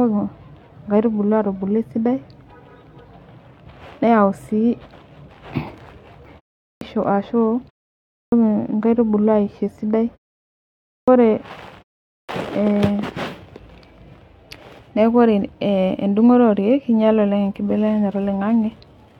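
Clipped start after a pause at 6.64, 8.14, 10.89 and 12.12 s: the output wakes late, cutting roughly 170–190 ms, so speech onsets appear as hard vertical edges from flat silence.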